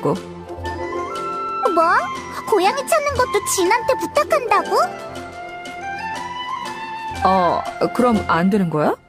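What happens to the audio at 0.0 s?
Nothing goes wrong at 0.0 s; the audio starts cleanly and is intact at that moment.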